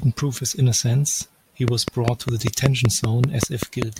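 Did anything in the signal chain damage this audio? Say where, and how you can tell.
Yes. A train of clicks runs from 1.68 to 3.83 s, about ten near-identical pulses at a steady 5.1 per second, standing roughly 20 dB above the speech. The regular, repeating shape likely points to interference coupling into the analogue wiring or a faulty connection or power supply.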